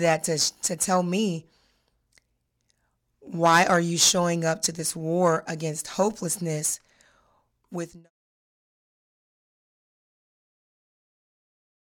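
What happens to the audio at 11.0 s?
Nothing goes wrong at 11.0 s; the audio is intact at that moment.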